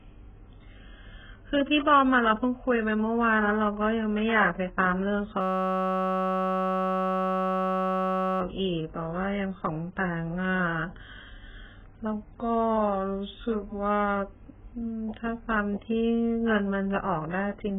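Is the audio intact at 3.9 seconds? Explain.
No, at 3.9 seconds the speech has heavy damage that runs through the whole clip and is likely AAC compression. Nothing survives above 3.7 kHz, so it sounds dull and smeared, with warbly, fizzy sibilants, which fits a starved bitrate around 8 kbps.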